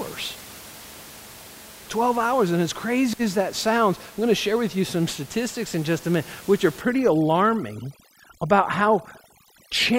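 Right after "a minute which are", at about 6.81 s, overdone noise removal kicks in and runs to the end of the clip. The noise reduction is set far too hard, so any frequency band that sits close to its idea of the room noise, which was about 21 dB under the speech, gets pulled way down or switched off. The quieter parts of the speech get eaten along with it. The background drops and breaks up into little twinkling specks.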